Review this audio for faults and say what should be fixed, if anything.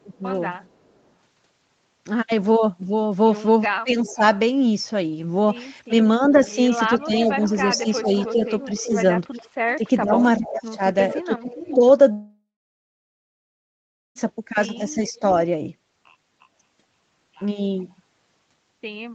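The speech sags in three places: briefly from 0.04 to 0.23 s (dips of about 10 dB, roughly 150 ms in total), more sharply from 3.67 to 4.23 s (dips of about 20 dB), and repeatedly from 5.88 to 11.82 s (dips of about 15 dB, around one and a half seconds affected in all). This is likely speech suppressed in double talk. While the far side was talking, the echo canceller treated this talker as echo and turned the microphone signal down along with it. A canceller with better double-talk detection, or a headset, would prevent this.

A faint delayed copy of the speech trails behind it, arriving roughly 0.38 to 0.40 s late. It is very quiet (about 40 dB down) from 0.66 to 0.96 s and in a short scrap at 17.80 s. It is louder (about 25 dB down) from 3.62 to 4.39 s, and louder still (about 15 dB down) through the long stretch from 6.26 to 11.75 s. This is likely an echo leak. A loudspeaker on the other end let the call back into its microphone, and that side's canceller did not remove all of it. 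Using headphones on that end, or retuning its echo canceller, would stop the return.

At 9.45 to 9.49 s the room sound briefly drops by about 13 dB for around 40 ms, then returns. This is background gated by the echo canceller. While the loudspeaker signal was active, the canceller clamped the microphone hard, and the ambience underneath the speech dipped for that instant. Gentler suppression, or comfort noise that fills the gap, would keep the background steady.

From 12.11 to 14.18 s the audio stops. A fading, smeared continuation of the last sound is followed by about 1.7 s of silence, and the speech then resumes with roughly 2 s missing. This is a long network dropout, likely caused by packets failing to arrive for that whole stretch. The receiver could only stretch the last sound briefly before giving up, and nothing was recovered. A more stable connection, or redundancy such as forward error correction, would reduce the risk of such gaps.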